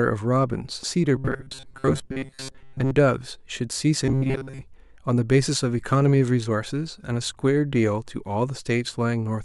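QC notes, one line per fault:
1.16–2.91 s and 4.06–4.62 s: robotic sound from repeated short buffers. The audio becomes a rigid, metallic buzz near 134 Hz that loosely tracks the speech, likely because a tiny block of about 7.5 ms keeps replaying while most new audio is skipped.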